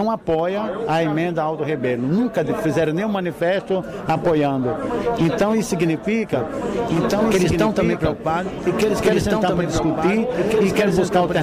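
At 6.33 s a doubled audio track kicks in: a few dB quieter, copy trailing about a second and a half behind, staying to the end, likely a second capture path or misaligned edit.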